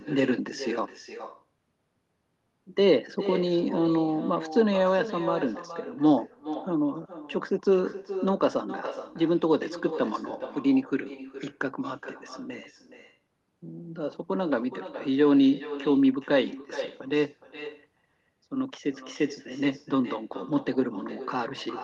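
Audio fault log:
Throughout, echo with no canceller: every phrase gets shadowed by a thinner copy about 14 dB down, arriving roughly 400 ms later. That's the far end's loudspeaker feeding its own mic, with nothing cancelling it, so your voice comes straight back after the round trip.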